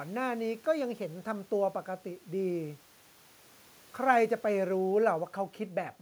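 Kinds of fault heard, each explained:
No kinds of fault are heard in this clip.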